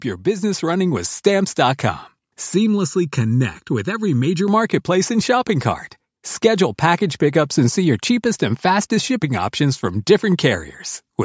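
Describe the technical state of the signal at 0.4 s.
At 0.4 s the speech and the background noise under it are swelling in loudness together, a slow, even climb rather than a jump. This is automatic gain rising: the gain control judged the incoming level too quiet and began turning its gain up, starting at 0.24 s and continuing until 1.2 s, for a total lift of about 4 dB. Because the gain scales everything in the signal, the noise floor climbs in step with the speech.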